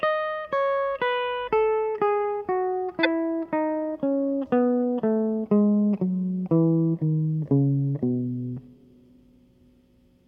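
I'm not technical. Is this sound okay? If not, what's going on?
No. At about 3.03 to 3.07 s the music has a brief chirp-like blip. That is a corrupt frame decoded: a couple of compressed chunks of audio were damaged, and the player played them anyway, putting sound in the wrong pitches for a split second.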